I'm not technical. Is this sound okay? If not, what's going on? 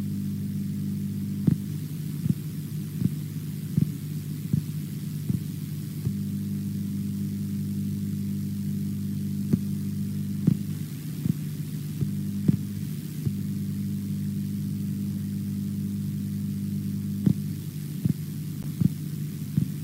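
No. Near the end, from 18.63 to 18.65 s, there is a brief squeak or blip. This is a corrupt frame decoded. A few small chunks of the compressed sound were damaged, but the player played them anyway. That put sound at the wrong pitches for a split second.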